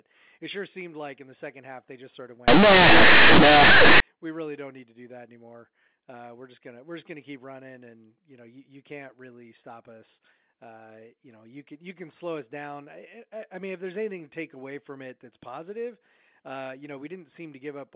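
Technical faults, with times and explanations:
2.48–4.00 s, companded audio read as linear: mu-law bytes played as raw 8-bit samples without expansion, so quiet speech swings over about half the range, as large as loud speech, giving harsh, loud buzzing distortion.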